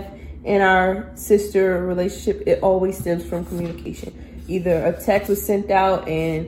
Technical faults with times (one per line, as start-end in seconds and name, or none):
3.85 dropped buffer (overrun)
5.27 dropped buffer (overrun)